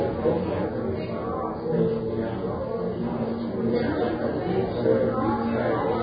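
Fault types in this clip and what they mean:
Vorbis compression: The audio was likely squeezed through a Vorbis encoder at a very low setting, consistent with a bitrate of around 16 kbps. With so few bits, the encoder keeps only a smooth outline of the spectrum and rebuilds the fine detail as coarse, noise-like filler. Nothing remains above about 4.9 kHz, so the top end sounds dull, while what survives is heavily damaged throughout: hissy and grainy, with roughened tones and smeared attacks.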